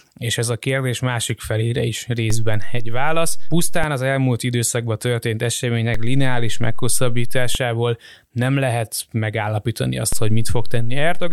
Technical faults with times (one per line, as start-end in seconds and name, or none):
2.30-3.84 DC step
5.94-7.55 DC step
10.13-11.32 DC step